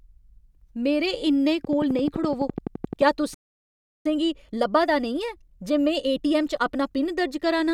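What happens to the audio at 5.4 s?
At 5.4 s the player is running a time-compressed catch-up from 4.06 to 7.06 s: after a stall it splices out small pieces to clear its backlog, so the speech comes through 1.1 times faster at unchanged pitch.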